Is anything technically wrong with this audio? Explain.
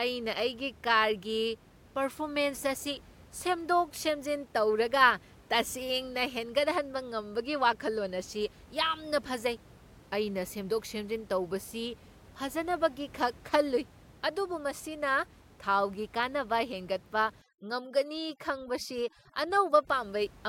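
Yes. From 17.42 to 19.87 s, overdone noise removal sets frequency bands near the noise estimate to near zero, so the speech sits over twinkling near-silence. The room noise sits about 25 dB below the speech. A spectrogram would show gaps in the speech harmonics and scattered isolated specks where the noise floor was.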